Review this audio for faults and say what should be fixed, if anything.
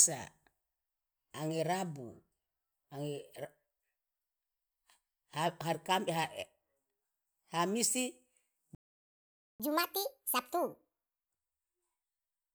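At 8.75 s the speech cuts to silence for about 0.85 s, resuming at 9.60 s. This playback stall was likely caused by the player's buffer running dry or its thread being blocked. Unlike a dropout, the gap contains nothing at all. A larger or better-fed playback buffer would prevent it.

From 9.60 s to 11.30 s the speech runs at 1.5 times normal speed, with pitch raised around seven semitones, before settling back. This catch-up at higher speed is the player resampling its backlog to regain lost time. Unlike a tape-speed fault, it follows the stall and then ends. Using time-stretching that keeps pitch, or skipping ahead instead, would prevent the audible shift.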